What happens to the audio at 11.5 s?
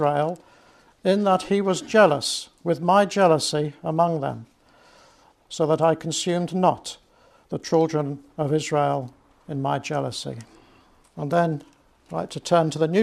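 Dropped samples at 11.45 s produce a single sharp click. A handful of samples, well under a millisecond's worth, are likely missing, so the waveform jumps straight to a later value. The gap is far too brief to remove any sound, leaving only a thin vertical line across the spectrum.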